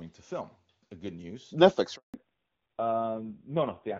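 In this speech recording, the voice dies away at 1.96 s and stays silent for 180 ms until 2.14 s. That is a handover gap: the call was moved between networks, and no speech frames arrived while the link switched over. From 2.14 s to the end, the speech turns dull and rough, with nothing left above 4 kHz. This is a fallback to narrowband. The wideband HD Voice path, which before the gap sounds clear and fits high-rate AMR-WB around 23.85 kbit/s, dropped to a low-rate AMR narrowband mode, most likely about 5.9 kbit/s.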